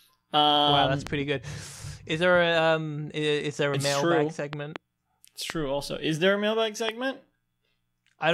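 Loud pops strike at 1.07 s, after "wow that's um", then as a double pop at 4.53–4.78 s, then at 5.50 s and 6.89 s, each about 15 dB above the speech, which continues underneath. The cause is likely a sudden voltage step or static discharge entering the signal.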